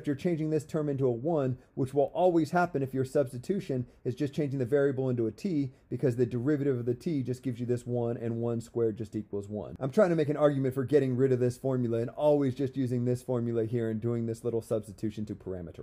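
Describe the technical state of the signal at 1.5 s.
At 1.5 s the signal is intact, with no dropout, clipping, glitch or other audible fault at that point.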